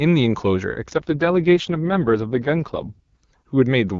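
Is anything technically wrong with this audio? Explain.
Yes. From 0.89 to 3.24 s there is an AMR rate drop: the speech turns rough and synthetic, which fits the codec falling from 23.85 to 6.6 kbit/s. Unlike a dropout or band switch, there is no gap and bandwidth stays wide.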